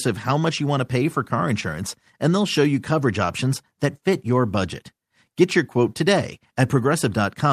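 No technical faults can be heard anywhere in this speech recording.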